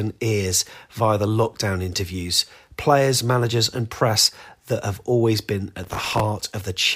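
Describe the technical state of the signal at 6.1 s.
A gritty crackle tears through the speech from 5.84 to 6.20 s, just after "that have always been". This is processor overload crackle: dozens of very short buffers miss their deadlines, each leaving a hard-edged fragment of old audio.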